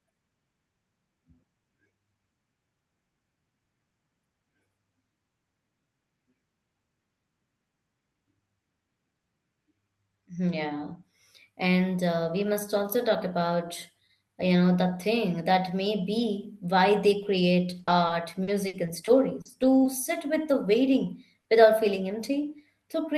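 From 17.79 s to 19.87 s, between "they create" and "sit with the", there is repeated packet loss with a robotic sound. Eight separate holes open in roughly two seconds, the longest 60 ms, totalling 260 ms, about 12% of the stretch. The decoder covers each one by extending the preceding sound, and the next hole arrives before the audio settles. The result is choppy and robotic, with fragments of the signal missing.

At 20.67 s, just after "sit with the", a lost packet is rebuilt from error correction. The following packet carried a low-bitrate Opus copy of the missing 20 ms, so nothing drops out. That frame is coarser and noisier than its neighbours. A second 20 ms frame is rebuilt the same way at 21.49 s.

Between them, from 21.41 s to 21.47 s, is a short concealed packet loss. About 40 ms never arrived in time. The receiver synthesised a continuation of the last sound and crossfaded back into the real signal, which gives a brief smear or wobble.

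The call path sounds like Opus at roughly 32 kbps, with audio extending to about 12 kHz.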